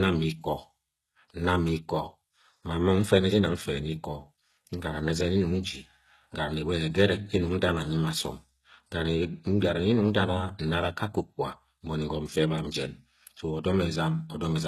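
All the way through, the speech has plainly audible codec damage, with nothing above 12.3 kHz, likely HE-AAC compression at a low bitrate near 16 kbps, its treble rebuilt from copied lower bands.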